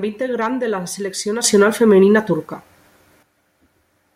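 At 1.44 s the speech and the background noise both leap up by about 10 dB in a single step, stay at that raised level, and drop back just as abruptly at 3.23 s. This is a sudden gain jump, likely a digital gain setting applied instantly rather than ramped. On a waveform the envelope forms a sharp-edged raised block; on a spectrogram the whole band, noise floor included, brightens between those two vertical edges.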